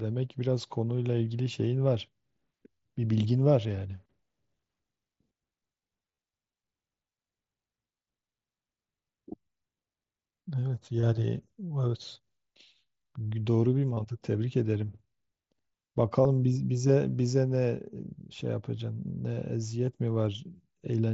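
A speech recording carried over a Bluetooth headset link, where voice packets were lost between headset and phone and the receiver patched each gap by repeating the best-matching stretch of the previous waveform. This concealed Bluetooth headset packet loss is worst at 6.03–6.18 s, where about 68 ms went missing in short bursts across 150 ms, the longest near 23 ms, giving a brief buzzy, held tone and a slight warble as real audio resumes. Smaller patches at 11.01–11.03 s, 13.95–13.97 s, 16.23 s and 19.86 s are shorter runs of repetition. The link's mSBC coding adds faint graininess on louder sounds.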